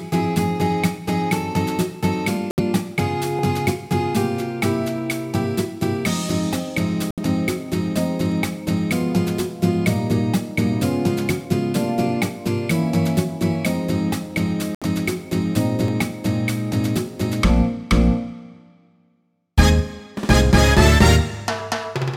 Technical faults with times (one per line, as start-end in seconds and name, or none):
2.51-2.61 corrupt frame muted
3.39 dropped buffer (overrun)
7.11-7.20 corrupt frame muted
11.45 dropped buffer (overrun)
14.75-14.85 corrupt frame muted
15.88 dropped buffer (overrun)